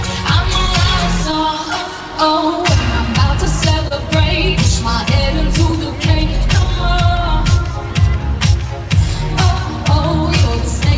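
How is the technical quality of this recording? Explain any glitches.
The recording has a steady timing problem and a few small dropouts, all sitting on a call-codec sound with nothing above 8 kHz, which fits G.722 at around 64 kbps.

Clock drift between sender and receiver runs through the whole clip. The sender's clock is about 2% slow relative to the receiver, so the receiver's jitter buffer keeps draining and has to be topped up. You hear that as a faintly unsteady, slightly draggy pace.

Repeated timing corrections are how that drift gets handled, from 0.06 s to 10.43 s. The receiver keeps stretching or repeating tiny slices, so playback runs at roughly 99% speed and gains something like 150 ms overall. The edits are unevenly spaced and come across as soft hiccups.

Scattered short gaps appear in three patches: 0.67–1.68 s, 2.96–3.93 s and 5.70–7.30 s. Each patch has about three lost or late packets that the receiver patched by extending the previous sound. 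The holes are tiny, at most about 30 ms, with the longest in the middle patch, so they show up as brief ticks or smears.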